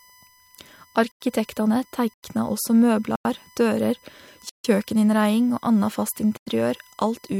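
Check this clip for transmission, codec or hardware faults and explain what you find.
Two faults are present: a steady USB whine and five blocks of digital silence.

The USB whine runs through the whole speech clip as a fixed tone at 1 kHz, roughly 35 dB below the speech. The bus draws current in 1 ms frames. That ripple leaks into the audio through power or ground and becomes a constant thin whine.

Blocks of digital silence occur at 1.12–1.21 s, 2.14–2.23 s, 3.16–3.25 s, 4.49–4.64 s and 6.37–6.47 s. Most last about 93 ms, which fits a 4096-sample buffer that was not filled in time. The one at 4.49 s lasts about 151 ms. Each is a hard dropout to silence.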